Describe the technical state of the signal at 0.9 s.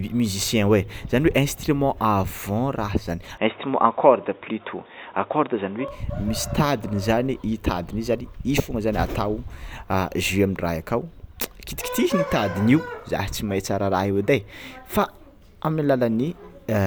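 At 0.9 s the signal is intact, with no dropout, distortion, or other technical fault affecting the speech at that moment.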